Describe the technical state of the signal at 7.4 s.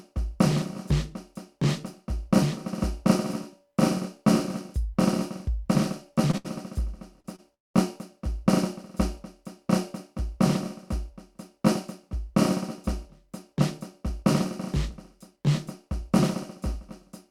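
A short stall from a late packet hits the music at 7.36–7.40 s. The jitter buffer ran dry, so about 22 ms was held, then resumed unbroken.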